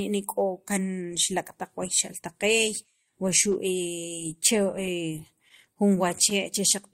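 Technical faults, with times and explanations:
4.67 to 6.34 s, scattered short gaps: across this stretch of speech, around ten tiny ticks, smears and hiccups break up otherwise clear audio, with the longest only about 15 ms. Packets went missing or arrived late at intervals, and each small hole was covered by extending the sound that came just before it. About a tenth of a second is patched in total, roughly 7% of the span, and the timing ends up about 12 ms longer.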